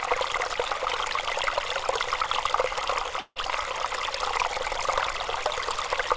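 Everyday sound carried over a call link whose G.722 coding leaves nothing above 8 kHz, with a gap from 3.20 to 3.39 s that is most likely a long network dropout. About 160 ms of audio never arrived; the receiver stretched the last sound into a fading buzz for roughly 160 ms, then about 40 ms of silence followed before the sound resumed with that part skipped. On a spectrogram the gap shows as smeared, decaying bands ending in a blank strip, and the waveform shows an envelope tapering to flat.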